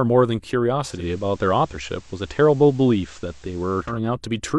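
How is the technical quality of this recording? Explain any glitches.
The recording has one clear fault. From 0.90 to 4.00 s, hiss rises about 30 dB below the speech, at unchanged level. This is digital radio blending to analogue: the receiver lost digital reception and cross-faded over 207 ms to the station's FM broadcast, then returned.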